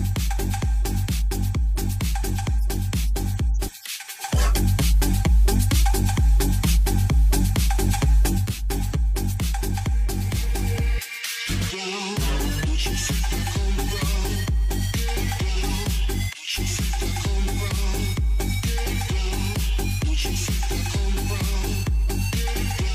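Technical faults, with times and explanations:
3.86–8.72 s, digital radio blending to analogue: the receiver lost its digital stream and cross-faded over 476 ms to the station's FM broadcast, then faded back at 8.72 s. The level shifts by about 3 dB and broadband FM hiss sits roughly 30 dB under the signal while the analogue path is active. Unlike a dropout or a gap, the audio never stops; it slides smoothly into a noisier copy of the same programme and returns.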